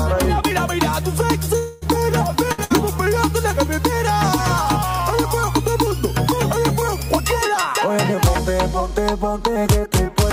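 A long network dropout, likely the cause of what happens from 1.57 to 1.86 s: the last sound is stretched into a fading buzz or hiss for about 240 ms, with no true silence, and the audio then resumes with roughly 240 ms of material gone.

Two bursts of packet loss follow, at 2.52 to 2.61 s and 2.64 to 2.73 s. Each time about 60 ms of audio failed to arrive, so the receiver held and faded the preceding sound before jumping ahead past the missing stretch.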